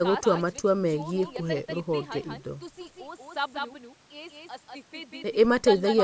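A second copy of the signal is likely being picked up through a slower capture path, or an edit has left two copies out of step, producing a doubled audio track that runs for the whole of the speech. The copy trails the original by roughly a fifth of a second and sits about 5 dB lower, at full bandwidth up to the call processing's 8 kHz limit. Every syllable gets a clean, dry echo with no room tail.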